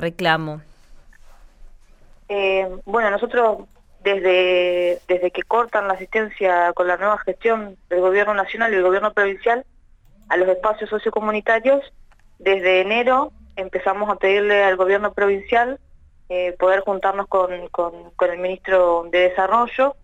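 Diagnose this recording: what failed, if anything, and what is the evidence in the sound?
No fault can be heard.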